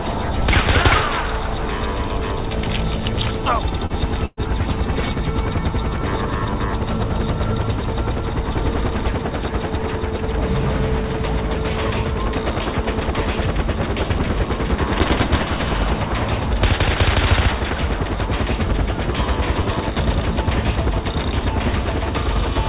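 At 3.86 s there's a short concealed packet loss running to about 3.93 s. Roughly 30 ms never arrived in time, so the receiver stretched the preceding sound to cover about 34 ms and blended back in. You hear it as a quick smear or wobble.

Just after, from about 4.26 to 4.4 s, comes a burst of packet loss. About 120 ms went missing, and the receiver kept extending the last sound for roughly 115 ms, fading it as it went. There's a brief dropout of about 20 ms before the audio picks up further along, with that stretch simply gone. Everything sits below 4 kHz, which fits a narrowband call codec like G.711.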